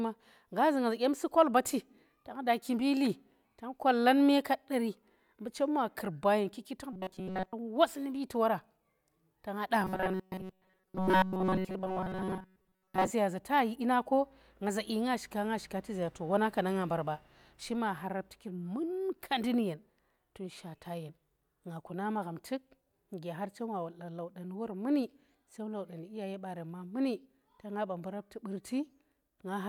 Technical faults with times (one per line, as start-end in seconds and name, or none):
6.93-7.53 robotic sound from repeated short buffers
9.81-13.11 robotic sound from repeated short buffers